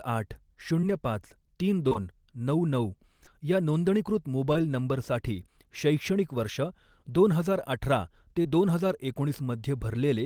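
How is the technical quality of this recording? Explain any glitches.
The speech carries six short concealed packet losses: at 0.81 s, back to back at 1.88 and 1.93 s, at 3.25 s, at 4.53 s just before "नंबरसाठी शैक्षणिक", and at 8.43 s right after "अठरा ते". Each time about 20 ms of audio failed to arrive, and the receiver extended the preceding sound before blending back. What separates this from a plain dropout is that nothing falls silent. Each spot is a brief smear or wobble, and the paired loss near 1.9 s stretches into a longer wobble.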